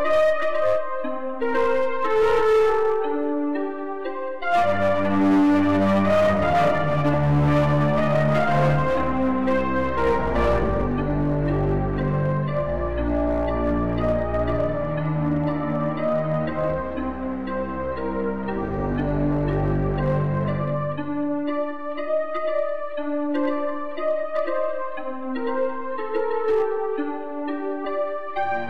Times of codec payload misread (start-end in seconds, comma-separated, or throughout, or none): none